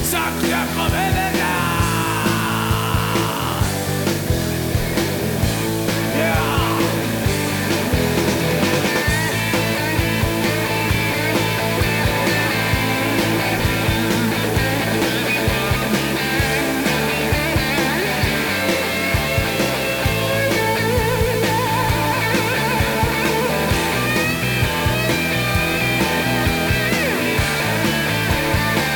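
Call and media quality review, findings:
Low bit depth with dither, whole clip. Symptom: constant, even hiss sitting roughly 15 dB under the audio, no distortion. Probable component: a requantising stage, since the noise level fits a 4-bit path. Mechanism: dither added before rounding turns the quantisation error into steady white noise. Worth finding where the word length gets cut.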